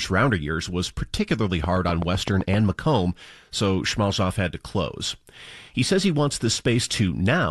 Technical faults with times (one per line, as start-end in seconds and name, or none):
1.64-2.55 train of clicks